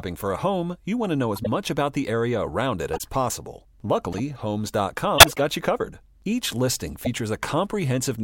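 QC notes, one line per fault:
1.35–1.47 s, 2.93–3.03 s, 4.13–4.20 s, 5.18–5.39 s, 7.03–7.07 s: corrupt frame decoded. The decoder played damaged frames and misread their gains, throwing energy to the wrong frequencies. The result is short chirps and noise bursts. The loudest, at 5.18 s, peaks around -5 dBFS.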